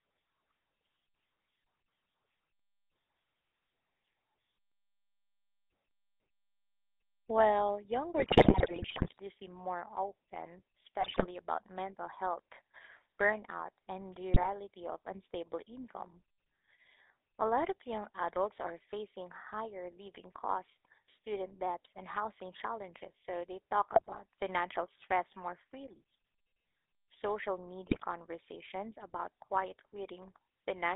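The whole clip runs through the GSM full-rate codec, its pulse-driven vocal-tract model leaving the speech buzzy and gravelly, with the band held to roughly 300 Hz to 3.7 kHz, consistent with 13 kbps coding. GSM bit errors then corrupt the decoder's filter, pitch and gain values at 8.18–9.18 s, 11.01–11.27 s, 14.34–14.48 s, 23.91–24.19 s and 27.86–28.03 s, each burst breaking the voice into squawks, pops and gargling.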